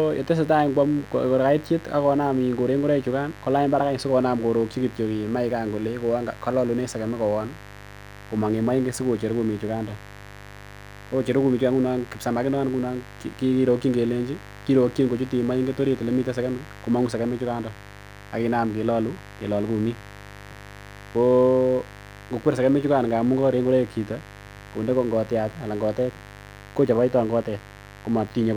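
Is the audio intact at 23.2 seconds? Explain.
No: mains buzz runs through the whole clip, including 23.2 s. Sharp switching spikes, twice in every 50 Hz cycle, stack harmonics into a raspy buzz, only some 20 dB below the speech.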